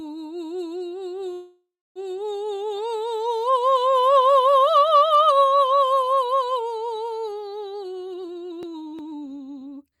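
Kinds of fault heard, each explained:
Call audio freeze: From 1.33 to 1.99 s the music stops and a fading continuation of the last sound fills the gap, ending in about 0.29 s of silence. Playback then resumes where it left off, so nothing is lost. The likely cause is delayed packets draining the jitter buffer.
Jitter buffer speed-up: From 7.95 to 9.97 s the music plays at about 131% speed with unchanged pitch. Many short pitch-period slices are cut out, around 0.7 s in all, to shed the surplus buffered delay. The steady tempo visibly hurries.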